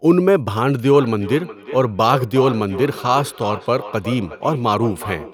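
Feedback echo between two devices runs through this speech clip from 0.89 s to the end, each phrase returning roughly every 0.4 s, thinner and ringing, at most about 13 dB below the direct speech. A second device in the room replays the call, its microphone recaptures it, and neither echo canceller removes the other's playback.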